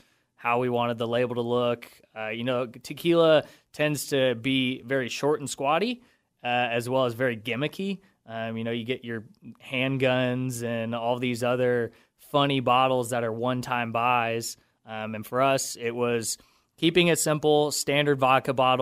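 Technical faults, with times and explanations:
Nothing technical stands out anywhere in this bit of speech, so there's no fault to list.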